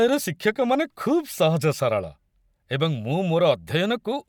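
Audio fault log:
No faults heard in this speech.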